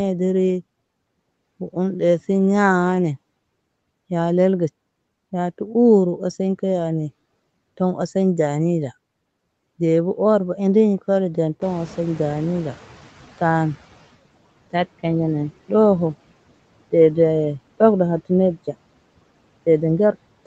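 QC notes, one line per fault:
11.61–14.09 s, noise suppressor catching up: the room noise steps up by about 14 dB at roughly 11.5 s. The suppressor's noise estimate lags behind, so the louder noise first passes with little reduction and then sinks by about 13 dB over some 2.5 s as the estimate adapts. On a spectrogram, the broadband floor between speech energy brightens abruptly and then dims. In the waveform, the low-level stretches between phrases shrink gradually.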